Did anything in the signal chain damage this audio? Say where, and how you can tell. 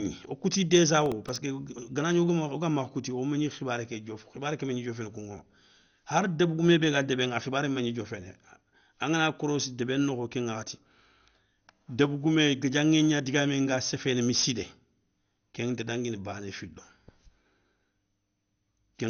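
Yes. The sound is dull throughout, with nothing above 6.5 kHz and a gurgling, granular texture. This is likely MP2 compression at a low bitrate: upper sub-bands are switched off and flicker, unlike a clean low-pass.

From 1.02 to 1.36 s, between "wo kouti" and "ganagni wogamakha kouti wo", there is processor overload crackle at the driver or buffer stage. Several sub-millisecond buffers were missed in a row and each replayed old audio, giving gritty tearing rather than a single click.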